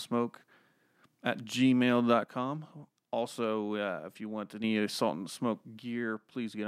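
Speech clip with two sudden level drops: from 2.24 to 4.64 s, and again from 5.78 s to the end, the sound falls by about 6 dB, and after the first drop it jumps straight back up. That step size likely comes from one channel dropping out. With the stereo pair summed to mono, losing one side halves the shared signal.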